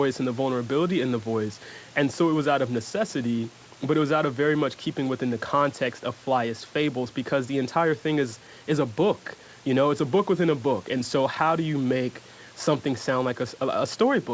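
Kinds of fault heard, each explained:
No faults heard.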